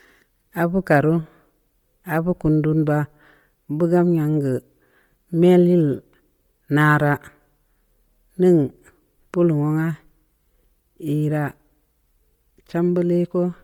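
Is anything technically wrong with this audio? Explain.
Yes. Throughout the speech there is heavy Bluetooth LC3 compression, likely from an LE Audio link. The coder drops much of the upper spectrum and fills it with noise, leaving a breathy, grainy edge. This fits 32 kbps with 10 ms frames. A spectrogram shows speckled, blocky high bands and nothing above 20.2 kHz.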